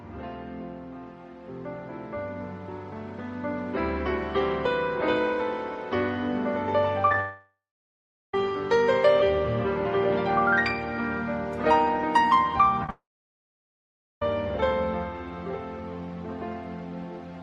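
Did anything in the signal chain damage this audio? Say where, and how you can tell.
Yes. At the network stage, short concealed packet loss at 7.08–7.12, 7.13, 12.84–12.86 and 12.86–12.89 s causes brief smears and wobbles where the decoder extrapolated the preceding sound.

A long network dropout, likely from lost packets, occurs at 7.20–8.34 and 12.90–14.22 s. Concealment fades, then silence holds for about 0.77 and 1.19 s before the audio resumes further on.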